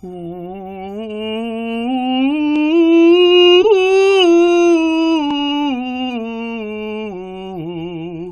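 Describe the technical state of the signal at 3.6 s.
At 3.62 to 3.65 s, a corrupt frame was decoded: flipped bits in a couple of compressed music frames were played anyway, so misread gains and codes put energy at the wrong frequencies, producing a loud blip of noise peaking near -5 dBFS.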